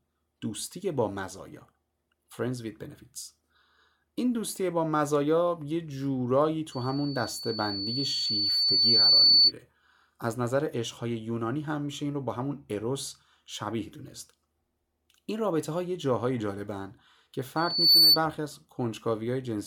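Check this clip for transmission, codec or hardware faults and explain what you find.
There's a hardware fault here: loudspeaker feedback squeal, twice. From 6.72 to 9.52 s a 4.5 kHz tone swells over a few seconds to about 10 dB above the speech. It returns from 17.56 to 18.19 s, building in well under a second to about 15 dB. The mic is picking up its own loudspeaker, and the loop gain tops one at that frequency.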